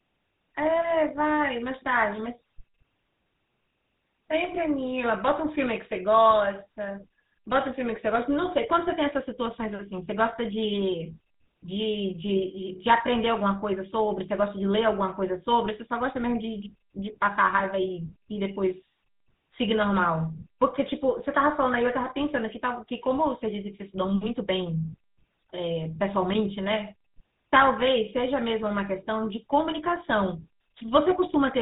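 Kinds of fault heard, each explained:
GSM full-rate codec: The speech has a buzzy, gravelly roughness throughout, and nothing reaches above 4 kHz. The cause is a vocal-tract model driven by coarse, regularly spaced pulses, and the plainly audible damage fits the 13 kbps GSM full-rate scheme.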